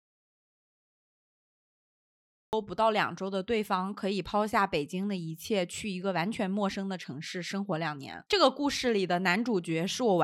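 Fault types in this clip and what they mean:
Audio dropout to silence: the clip opens already in dead silence, with no room tone at all, until about 2.53 s, when the speech begins abruptly. Unlike a quiet passage or a gated pause, nothing of the background survives, which points to the input likely being lost while the recorder kept writing silence.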